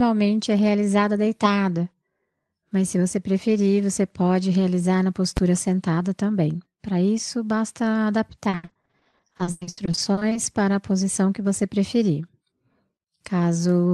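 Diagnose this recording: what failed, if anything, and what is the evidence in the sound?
At 5.37 s, between "você pode realizar na" and "sentada também", there is a single sharp bang, far louder than the speech around it. This is invalid numbers at full scale in a processing or sample-format conversion stage. A calculation produced infinite or undefined values, and the conversion pinned them to the maximum sample value. The block lasts only about 10 ms, so the loud onset and release merge into one bang.

From 8.49 s to 10.37 s, ending just before "para a posição que", the speech turns choppy, with dozens of short dropouts packed close together. This is repeated packet loss (robotic sound) at the network stage. Packets kept arriving late or not at all, and the Opus decoder in this call path patched each hole by stretching out the last sound it had. About half of that stretch is concealment rather than real audio, and the longest single hole is about 100 ms.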